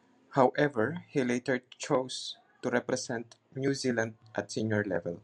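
No technical faults are audible.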